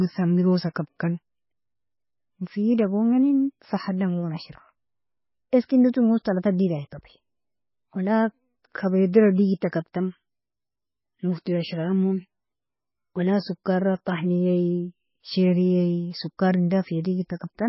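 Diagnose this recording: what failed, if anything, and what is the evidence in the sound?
The codec stage failed, with heavy MP3 compression running throughout the speech. Nothing survives above 5.6 kHz, and the sound is watery and swirly, with smeared consonant onsets. This fits a very low bitrate around 15 kbps, likely starving the encoder. A spectrogram shows a hard ceiling at 5.6 kHz and patchy, flickering blocks below it.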